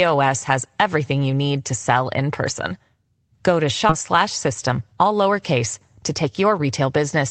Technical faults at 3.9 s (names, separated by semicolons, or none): skip ahead